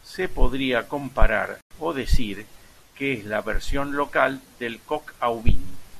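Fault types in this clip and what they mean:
digital broadcast dropout: the receiver lost good frames and muted until valid data returned, leaving a 96 ms silent gap between "podría comparar" and "o decir que es".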